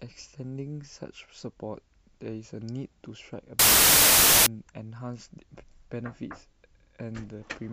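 At 3.59 s the speech gives way to loud, harsh broadband noise that lasts until 4.46 s. The fault is samples built from the wrong bytes: across this span each sample has been assembled with its bytes misaligned or in swapped order, so the rapidly fluctuating low-order bits land in the most significant position. The result is broadband hiss at high level.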